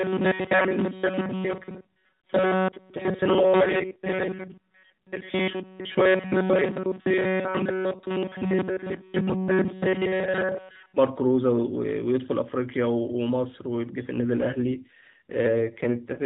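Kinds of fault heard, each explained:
Robotic sound from repeated short buffers: From the very start to about 10.97 s, the speech carries a rigid, metallic buzz pitched near 188 Hz. The sound follows the original speech only roughly. Most of the sound in that stretch seems to be repeats rather than fresh audio. The likely cause is a playback path starved of new data. It loops a fragment of about 5.3 ms each time, which sets the buzz at 188 Hz.
AMR rate drop: Twice the speech turns rougher and more synthetic, from 3.38 to 5.31 s and from 14.36 s to the end. There is no gap. The narrow phone band of the AMR narrowband codec stays the same. This fits the mobile link switching the codec from 12.2 kbps down to 5.9 kbps. Bits go to error protection instead of the voice. Fewer bits leave a buzzier, coarser sound until the rate recovers.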